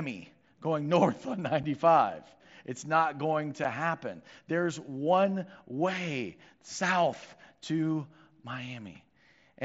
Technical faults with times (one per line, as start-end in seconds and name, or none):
1.63 unconcealed Bluetooth headset packet loss
3.64 unconcealed Bluetooth headset packet loss